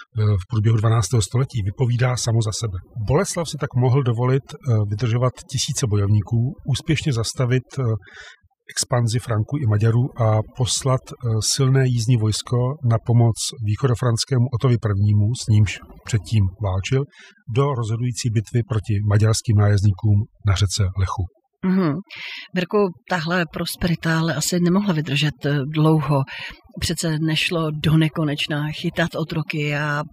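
From start to finish you're hearing overdone noise removal. The denoiser was pushed too hard, so any frequency band near its noise estimate gets slammed down, taking quiet bits of speech with it. Gaps fall to near silence with twinkly specks.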